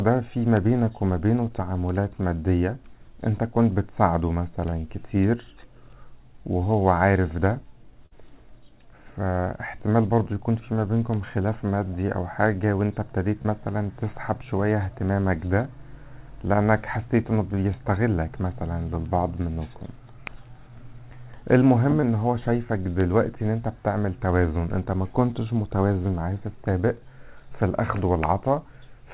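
Three brief smears, each a tiny wobble, are short concealed packet loss at 4.70 to 4.74 s, 13.42 to 13.47 s and 22.01 to 22.04 s. Each time about 20 ms of audio arrived too late, and the receiver bridged the hole by extending the preceding sound for roughly 20 ms before rejoining the real signal. Around 8.06 to 8.21 s a burst of packet loss produces a held, fading tail followed by a slight jump forward. About 40 ms went missing, the receiver stretched the last sound over 50 ms while turning it down, and the audio resumes with a small piece skipped. The whole clip has nothing above 4 kHz, which fits the narrowband, 64 kbps G.711 mu-law coding of the call path.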